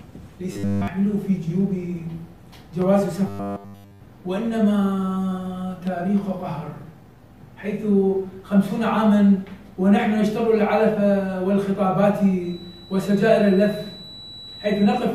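From 0.53 to 0.88 s and again from 3.27 to 4.01 s, new audio likely arrived too seldom. The software filled the gaps by looping nearly all of the material from a short buffer, which fits a 10 ms repeat. The result is robotic sound from repeated short buffers: a rigid, metallic 100 Hz buzz that only loosely follows the underlying sound.

From 12.37 s to the end, the loudspeaker-to-microphone loop likely sat right at the edge of feedback without running away. This leaves a feedback whistle, a thin, steady 3.9 kHz tone about 20 dB below the main sound that swells and fades slowly in level.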